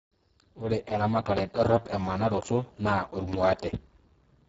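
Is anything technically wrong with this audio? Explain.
Yes, there are two problems here.

The whole clip has heavy Speex codec damage. Speex is a CELP speech coder, and at this quality it has very few bits to rebuild the excitation, so the speech comes out hoarse, noisy and edging toward robotic, which points to a very low bitrate around 6 kbps. Nothing comes through above about 7.7 kHz, and the top band that is there sounds like shaped hiss rather than real detail.

There are also two loud pops, at 1.37–1.40 s and 3.33–3.36 s, each a single sharp hit about 30 ms long, peaking roughly 15 dB over the speech, while the speech carries on underneath. The likely cause is a sudden voltage step or pulse, say from a plug, switch, static discharge or driver glitch, which the downstream circuitry shapes into that brief thump.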